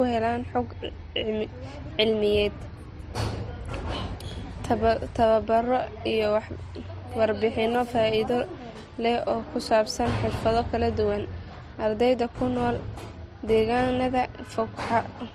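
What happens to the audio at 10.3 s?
At 10.3 s the speech carries the same transcoding between lossy codecs heard throughout. It likely passed through MP3 and then Opus, each adding its own smearing and swirl, with nothing above 15.7 kHz. The low-bitrate texture fits roughly 40 then 32 kbit/s.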